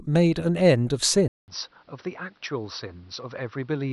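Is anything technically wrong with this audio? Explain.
Yes. At 1.28 s the input likely switched to a poorer device, such as another microphone or headset profile. After a 200 ms silence, the speech runs to the end with nothing above 5.9 kHz, sounding dull, somewhat quieter, over a new faint noise floor.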